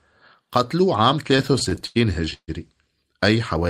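From 1.31 to 2.50 s the speech drags and stutters, with sound held over gaps up to 142 ms: repeated stalls (stutter), as late packets kept emptying the jitter buffer.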